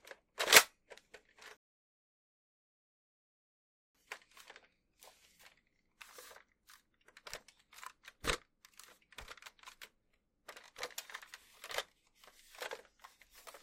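A recording of sounds with a rebuffering stall from 1.57 s to 3.95 s. The audio drops to silence for about 2.38 s and then picks up exactly where it left off, with nothing skipped. That pattern means the player exhausted its downloaded buffer and paused playback until more data arrived. No content is lost, but the stall inserts roughly 2.4 s of dead air into the timeline.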